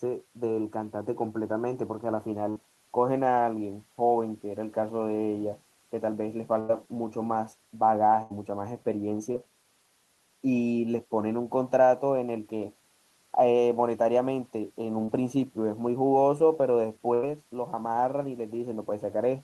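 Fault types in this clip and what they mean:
Burst of packet loss: Four runs of consecutive packets fail to arrive in time, at 2.49, 6.60, 8.23 and 17.14 s. Each time the decoder extends the last received sound for roughly 60 to 90 ms while fading it down, giving a held buzz or dying hiss. Playback then picks up further along, so about 60, 100, 80 and 80 ms of the talker's audio are lost outright.
Short concealed packet loss: Two brief dropouts, at 9.32 and 15.04 s, where about 20 and 40 ms of audio never reach the decoder. The receiver bridges each hole with roughly 24 and 36 ms of continued, pitch-based or noise-like sound before crossfading back into the real signal. The result is a quick smear or wobble in the speech rather than an audible gap.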